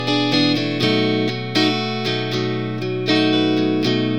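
From start to finish the clip plays with a wrong sample rate: everything runs 1.5 times too fast and sits about 7 semitones high, which fits 32 kHz material played at 48 kHz. Unlike a pitch shift or time-stretch, speed and pitch rise together, with no processing artefacts.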